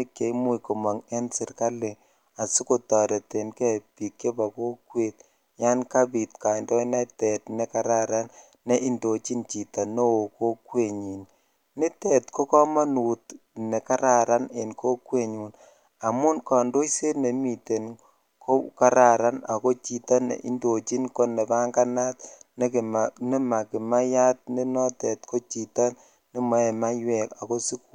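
No audible technical faults.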